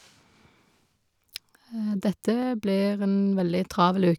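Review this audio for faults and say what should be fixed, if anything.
Three sharp clicks cut through the speech at 1.36, 2.43 and 3.40 s. Each is likely dropped samples, a fraction of a millisecond lost. Keep the capture buffer from underrunning.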